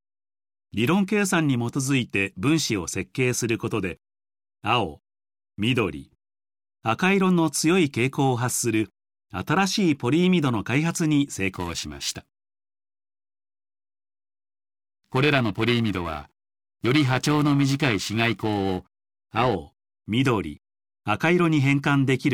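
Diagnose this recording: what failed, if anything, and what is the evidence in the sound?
The converter stage failed with periodic clock jitter from 11.55 s to 19.55 s. Sound in that span takes on a rough, metallic edge, worst on high-frequency content. Interference wobbling the sample clock at around 1 kHz puts sidebands at that spacing around every component.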